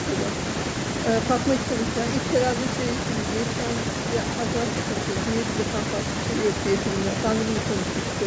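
No technical faults can be heard in this speech recording.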